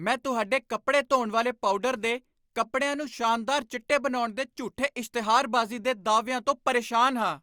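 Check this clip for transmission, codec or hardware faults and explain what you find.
No faults were detected.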